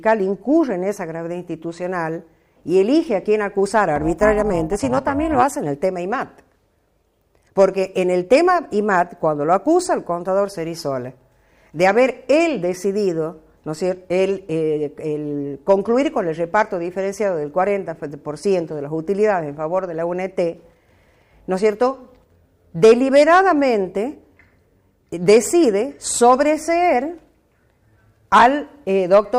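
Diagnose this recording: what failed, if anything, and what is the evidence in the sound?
The failure is an overlap-add ripple in a frame-based processing stage, such as call processing. From 3.96 to 5.43 s the level pulses rapidly, about 11 dB deep, at around 400 Hz. That gives the sound a metallic buzz with extra tones around each note. The stage cuts the signal into windowed frames and sums them back together. Here the overlapping windows do not add up to a constant gain. So the level dips and swells once per frame.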